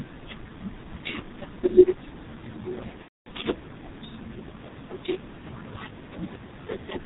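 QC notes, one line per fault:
throughout: G.723.1 codec, heavily damaging; speech is muffled and hoarse with blurred consonants, nothing above 4 kHz, and the sluggish model fits a 6.3 kbit/s mode.
3.02–3.28 s: VoIP packet loss concealed by the speech codec; about 240 ms missing, which fits eight 30 ms frames. The decoder extrapolates, stretching sound into a buzzy tone or coloured noise that fades.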